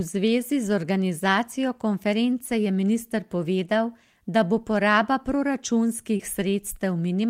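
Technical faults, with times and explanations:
2.45–2.49 s and 6.17–6.21 s, short concealed packet loss: each spot has a brief smear or wobble where 20 ms of the call arrived too late to decode, so the receiver bridged the gap by extending the preceding sound, then blended back into the real signal.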